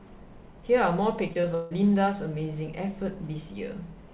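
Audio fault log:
1.28–1.73 s, repeated packet loss (robotic sound): four dropouts land close together, the longest about 158 ms, and each gets patched by stretching the last bit of sound, so almost half this stretch is filler. That's the choppy effect, heard over the call path's 4 kHz ceiling.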